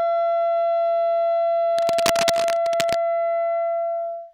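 From 1.78 to 2.95 s, cable scratch noise rides over the sound as a dense, uneven rustling, roughly 10 dB below the main signal. The likely cause is a worn cable, connector or control being moved, so its contact resistance jumps about rapidly. On a waveform this appears as ragged, spiky bursts added to the trace; a spectrogram shows irregular broadband vertical smears packed across that stretch.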